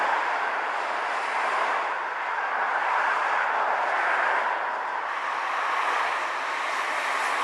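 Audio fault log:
5.08–7.44 s, section at the wrong speed: from 5.08 s to the end, the sound suddenly runs about 15% fast, so everything jumps up roughly two semitones and feels hurried, with pitch and pace shifting together at that one point. That coupling is the giveaway: this last stretch was likely played back or resampled against the wrong clock, which speeds up timing and raises pitch in one go, rather than a deliberate pitch effect.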